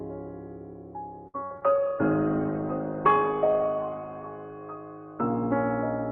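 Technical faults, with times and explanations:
1.27–1.77 s, repeated packet loss (robotic sound): Four holes open in the stream in quick succession, the longest about 66 ms. Each is patched by stretching the previous sound, so nearly half this half-second of music comes out choppy, with fragments missing.
1.69–5.65 s, call bitrate drop: The call's bandwidth estimate collapsed and the encoder switched to much coarser coding, which fits a fall from 48 to 13 kbps. Audio bandwidth shrinks from 12 kHz to 4 kHz, so the music turns muffled and watery, worst for about 2.4 s.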